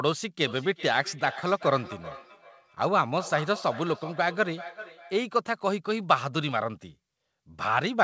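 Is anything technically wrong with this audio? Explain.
Yes. From 0.46 s to 5.27 s there is feedback echo between two devices: a second device on the call replays this microphone's audio, which is picked up again, escaping echo cancellation. Repeats arrive roughly every 400 ms, peaking about 16 dB below the speech, sounding thin and ringing.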